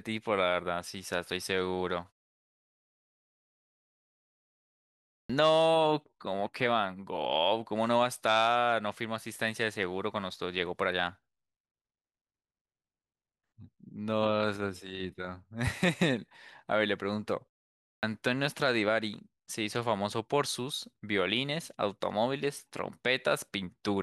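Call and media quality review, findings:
Clipped start after a pause, 5.18–5.30 s: output device dozed during a 3.14 s silence and was still waking or relocking when audio resumed. About 115 ms swallowed; the phrase begins abruptly, its opening sounds missing.

Clipped start after a pause, 17.91–18.03 s: same wake-up lag after only a 0.49 s gap, about 119 ms lost. The next phrase snaps in mid-onset, its opening sounds gone.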